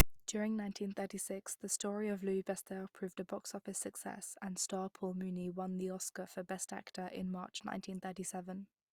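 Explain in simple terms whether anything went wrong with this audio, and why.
Right at 0.0 s, a brief hard-edged rasp then a moment of silence: file tags played as audio. Text read as sound, followed by blank padding.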